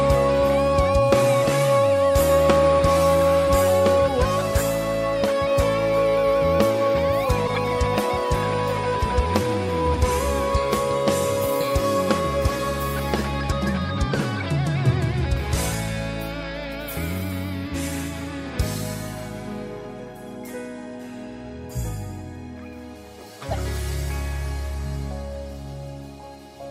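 Corrupt frames decoded: damaged compressed data was played anyway, putting energy at wrong frequencies and producing brief chirps or noise bursts at 7.47–7.58 s, 14.40 s and 23.50–23.55 s, each spanning a few frames.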